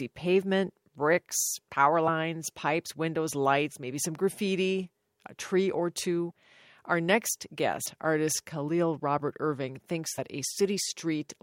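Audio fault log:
3.74 s, compressed frames skipped: right after "pipes windows" the sound leaps forward by about 50 ms into "maybe some graffiti a", and the join is a soft smeared blip, not a click. That gap fits two lost frames of about 23.2 ms, and the overlap between neighbouring frames blurs the seam.
6.30–6.32 s, compressed frames skipped: after "graffiti a tree or" there is a similar smeared jump of about 50 ms, again consistent with two missing frames.
7.85 s, compressed frames skipped: a longer lurch of about 100 ms, which fits roughly five frames, softened at the seam by frame overlap.
10.17 s, compressed frames skipped: a blurred jump of about 70 ms, consistent with around three dropped frames.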